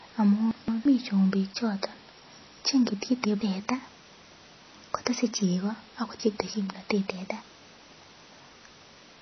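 Throughout the speech there is a hard ceiling at 5.8 kHz, with nothing above it, and a plainly audible watery, swirling texture, with sibilants turning metallic and smeared. This is likely MP3 compression starved of bits, which fits a bitrate around 24 kbps. The encoder discards the treble outright, and the weak spectral lines it keeps flicker in and out from frame to frame.

From 0.51 to 0.85 s, chunks out of order produce a brief garbled stretch. A segment of about 171 ms plays one chunk later than it should, so the audio jumps ahead and then back, leaving three abrupt joins. Nothing is missing, only misplaced. The same fault returns from 2.90 to 3.41 s, where a chunk arrives two positions late and the jumble lasts longer.

From 3.60 to 5.44 s the speech runs about 6.4% fast and sits roughly 107 cents sharp, about a semitone, before snapping back. This is likely a drift correction step: clock-matching software probably changed the playback rate in a single jump to rebalance its buffer, so speed and pitch moved together.

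At 6.20 to 6.54 s another one-chunk swap repeats the jumble. From 7.10 to 9.16 s the same roughly semitone-sharp speed-up recurs.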